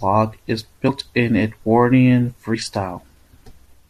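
Compressed frames were skipped in this speech recording: at 0.87 s the decoder dropped a short run of whole frames, either because they were missing from the file or because it rejected them as damaged. Roughly 70 ms of speech vanishes there, so the talker seems to lurch forward mid-flow.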